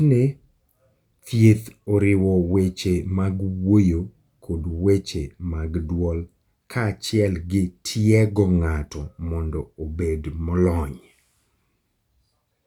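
Nothing in this bit of speech trips a technical fault anywhere along the way, so there's nothing to point out here.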